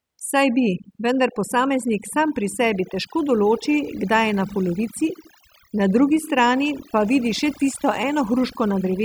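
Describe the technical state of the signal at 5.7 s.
At 5.7 s the speech is caught in the overdone noise removal that runs through the entire clip. The noise reduction is set too hard, so any frequency band that sits close to its noise estimate is pulled far down or switched off, taking the quieter parts of the voice along with the noise. The background drops and breaks up into twinkling specks.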